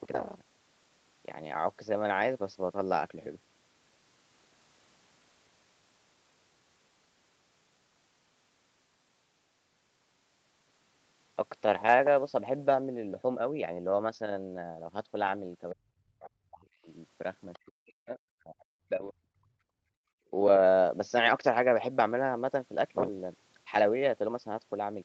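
From 15.72 to 16.88 s the speech sinks hard, down by something like 40 dB at its worst, for roughly a second in total. That's speech suppressed in double talk, likely because the echo canceller heard both sides at once and couldn't tell the talker from the loudspeaker echo, so it turned everything down.

At 17.53 s there's a tiny scrap of the other side's voice leaking through, very faint at about 30 dB under the speech. It's likely loudspeaker playback the canceller didn't fully scrub from the mic.

Then 17.67 to 19.58 s brings a second, longer round of speech suppressed in double talk, about one and a half seconds affected and again dipping as deep as roughly 40 dB, likely the same double-talk confusion as before.

Right after, from 19.86 to 20.03 s, the room tone drops out by about 31 dB for roughly 150 ms. That's background gated by the echo canceller, clamping the mic while the loudspeaker played and releasing it a moment later. 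Throughout, nothing sits above 8 kHz, which fits wideband Opus on a call path.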